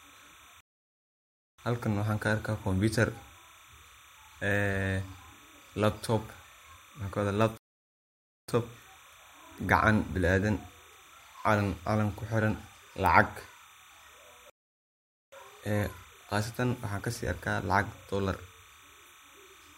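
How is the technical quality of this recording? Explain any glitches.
The recording has two technical faults. A timecode signal leaks in from start to finish, and playback stalls three times.

Timecode bleed runs under the whole speech clip. Linear timecode from an adjacent track or cable has coupled into the audio path. That code is a square wave flipping between two pitches, here near 1 kHz and 2 kHz. Its rhythm fits 29.97 fps code. It sits about 25 dB below the speech. The result is a thin, steady chirping warble behind the voice.

Rebuffering stalls occur at 0.61 to 1.59 s, 7.58 to 8.49 s, and 14.50 to 15.32 s. Each time, the player exhausted its downloaded audio and waited for more data. The sound drops to silence, then resumes exactly where it stopped. The gaps last about 0.98 s, 0.91 s and 0.83 s. No speech is lost. The pauses only add time.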